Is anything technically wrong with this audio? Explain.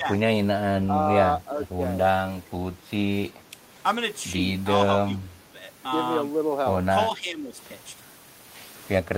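Yes. The speech dips at 0.0 to 0.2 s, 0.87 to 0.94 s, 5.13 to 5.6 s and 7.17 to 7.56 s, falling by as much as about 15 dB in the third. This is likely speech suppressed in double talk: the echo canceller mistook overlapping far-end sound for echo and attenuated the talker too.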